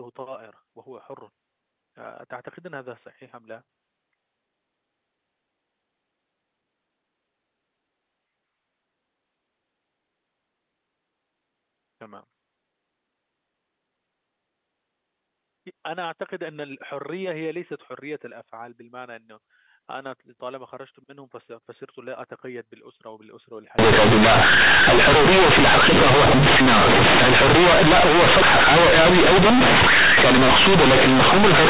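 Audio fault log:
23.79–31.69 s, companded audio read as linear: the A-law bytes play as raw 8-bit samples without expansion, so every sign change swings across half the range and quiet passages match the peaks. Unlike clipping, the pauses fill with loud buzzing noise.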